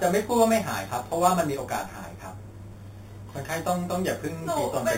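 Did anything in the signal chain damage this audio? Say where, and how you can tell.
Yes. The sample-rate conversion stage damaged it: the speech, which sounds like an 8 kHz source, was raised to 44.1 kHz by repeating samples with no smoothing filter. This imaging from sample-and-hold upsampling shows throughout as a metallic fizz between 4 and 8 kHz, about 16 dB below the speech.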